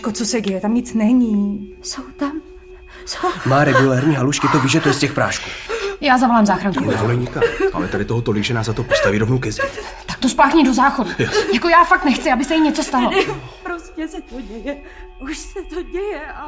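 No technical faults can be heard anywhere in this audio.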